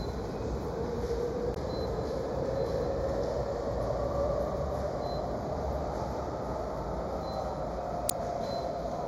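From start to finish the sound is hollow and phasey, with fixed notches, the lowest around 3 kHz. This is channel delay (comb filtering): one channel runs a fraction of a millisecond late, so summing to mono cancels shared content at evenly spaced frequencies.

At 1.53 to 1.57 s and again at 8.06 to 8.12 s, a brief glitch cuts through. These come from damaged data in a compressed stream: corrupted frames are misread, and the decoder loses sync and resumes at the next frame header.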